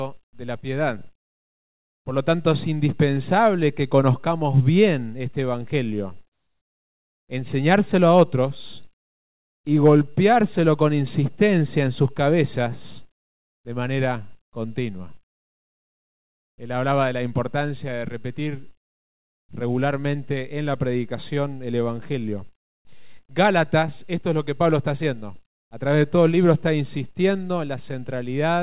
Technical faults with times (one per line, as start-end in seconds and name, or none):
6.32-7.28 comfort noise in place of the background